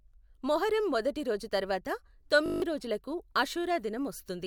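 Speech with a system hang loop from 2.46 to 2.62 s: one 20 ms slice repeats exactly eight times, giving a steady 50 Hz buzz while roughly 150 ms of audio is lost. Unlike a plain dropout or a ragged stutter, the identical repeats produce a pitched tone.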